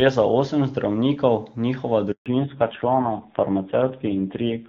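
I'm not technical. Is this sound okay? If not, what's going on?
No. Two things happen, one right after the other. At 2.12 s, just after "za osem zdravnikov njihova", there is a handover gap: the phone switched the call from one network to another, and for about 140 milliseconds, until 2.26 s, no speech reached the other end. The voice quickly dies away into silence, and whatever was said during that moment is simply gone.

When the sound returns at 2.26 s, there is a fallback to narrowband. Up to the gap, the call ran on the HD Voice codec and sounded full and clear. After the switch, the new network carried it with an older, basic phone codec. Everything above 4 kHz is missing from there to the end, so the voice sounds duller, flatter and rougher, like an old landline.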